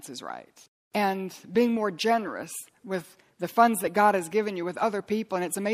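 Speech with plainly audible MP3 compression throughout, likely from a low bitrate near 64 kbps: watery, swirly sibilants, and a spectrogram showing a flat treble ceiling with flickering holes.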